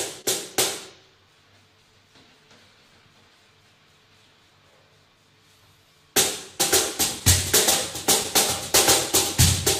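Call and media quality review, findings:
Clock drift between sender and receiver, whole clip: sender running roughly 1.5% slow, jitter buffer keeps draining, so small timing hiccups crop up unevenly throughout.

Short stall from a late packet, 0.21–0.26 s: jitter buffer ran dry, last sound held about 27 ms until the packet turned up. Nothing lost, just a brief smear.

Repeated timing corrections, 1.29–5.94 s: receiver padding out pieces to keep pace with the slow clock. Playback at about 98% speed, roughly a tenth of a second added.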